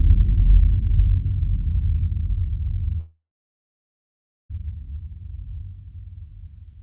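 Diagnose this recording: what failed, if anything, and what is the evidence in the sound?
Long network dropout, 3.0 to 4.51 s: the sound fades into a buzz, then about 1.3 s of silence, and resumes with that stretch lost, likely from network packets that never arrived.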